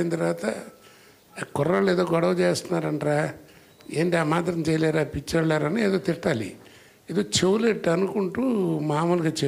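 Nothing stood out as a technical problem on listening to this audio.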